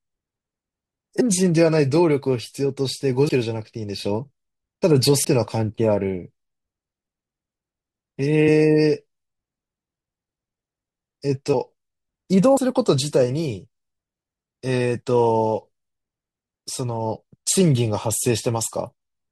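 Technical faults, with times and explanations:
1.2 s and 5.24 s, compressed frames skipped: the speech jumps ahead by roughly 100 ms, then 150 ms, consistent with several whole codec frames missing or rejected as damaged. Each join shows as a vertical seam on the spectrogram where the patterns abruptly shift.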